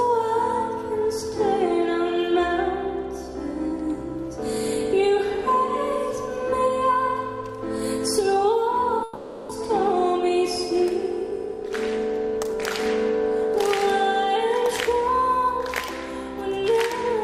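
The audio breaks off at 9.03 s. The last sound is drawn out as a buzz or hiss that fades, with no true silence, until 9.51 s. About 0.46 s is skipped when it resumes. This is likely a long network dropout, with the receiver filling the gap.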